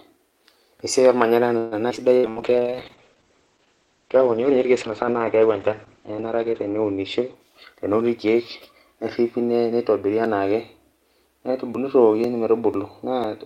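From 1.57 to 2.39 s the speech breaks up with repeated packet loss, producing a robotic sound. Four gaps remove 180 ms in total, the longest 140 ms, and about a third of the stretch is patched by stretching the last sound. Unlike a single dropout, the holes come back to back, which makes the sound choppy.

Inside that stretch, at 1.89 to 1.93 s, playback does a skip ahead. Around 70 ms of audio was discarded and the delay shortened by roughly 50 ms. Instead of a concealed hole there is an abrupt forward jump with almost no gap.

A call bitrate drop follows from 2.26 to 8.87 s. The encoder falls from 64 to 9 kbps and stays at the bottom for about 4.3 s, and the bandwidth narrows from 20 kHz to 8 kHz. The result is a muffled, watery, coarse tone. The timing stays intact; only the quality changes.

From 2.52 to 3.31 s a jitter buffer slow-down repeats pitch periods to add 72 ms, so the speech plays at 92% speed. 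Sounds are drawn out at unchanged pitch, which separates this from a tape-like slowdown.

From 7.45 to 9.42 s the opposite happens with a jitter buffer speed-up. Roughly 150 ms is trimmed away and the speech runs at 107% speed, hurried but at the same pitch. It overlaps the end of the low-bitrate stretch.

From 10.25 to 13.24 s come periodic USB or driver dropouts, about seven of them spaced 0.5 s apart. Each skips a few milliseconds of audio rather than inserting silence. They are heard as evenly spaced ticks, and their strict regularity distinguishes them from network loss.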